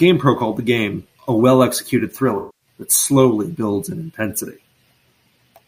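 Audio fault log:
2.37–2.67 s, AAC frame loss with concealment: a gap of roughly 0.3 s in the speech just before "that slowly builds in" gets papered over rather than going silent. The decoder keeps re-using the last good spectrum with scrambled phase, so the stretch comes out as a smeared, noisy or phasey patch. The length fits a run of about eleven lost frames, around 235 ms of audio.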